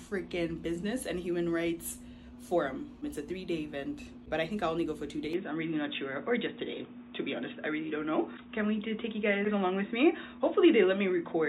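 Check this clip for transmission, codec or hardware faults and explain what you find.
One fault is present. From 5.33 s to the end, the audio turns dull and boxy, with nothing above 3.8 kHz and a faint new noise floor well below the signal, with no gap and barely any level change. The likely cause is an input switched to a poorer, narrower-band device.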